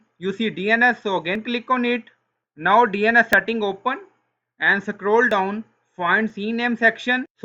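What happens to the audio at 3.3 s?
At 3.33 s, an overlap between stream segments occurs. Adjacent 1 s segments claim the same brief stretch of time, so the player trims 10 ms of genuine sound at the join. The waveform jumps abruptly, heard as a tiny skip, and a spectrogram shows a thin vertical broadband line.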